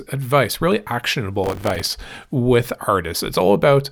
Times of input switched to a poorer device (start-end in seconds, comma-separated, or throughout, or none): none